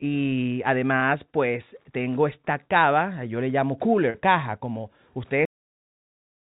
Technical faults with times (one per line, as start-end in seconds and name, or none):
1.00-1.04 short concealed packet loss
4.10-4.16 short concealed packet loss
5.45-6.48 cut-off end